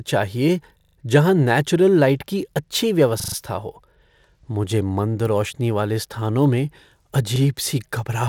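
Repeated buffer at 0.80 to 0.96 s, just before "जहाँ नेचुरल लाइट की", at 3.20 to 3.36 s, after "नेचुरल लाइट की अच्छी", and at 7.36 s: late audio made the device replay a 40 ms fragment, four extra times in the first two and once in the last, heard as a hard-edged stutter with nothing skipped.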